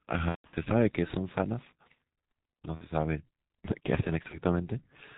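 Throughout, the speech sounds muffled and hoarse, with nothing above 4 kHz and smeared consonants. This is heavy G.723.1 codec damage: a low-rate telephony coder at 6.3 kbit/s working in 30 ms frames and updating its voice model slowly.

From 0.29 to 0.55 s the speech breaks into a buzzy tone or coloured noise that fades, with about 210 ms missing in scattered gaps, the longest 150 ms. Briefer dropouts follow at 2.75 to 2.86 s and 4.28 to 4.38 s. This is VoIP packet loss concealed by the speech codec, which extrapolated the last pitch and filter at falling gain.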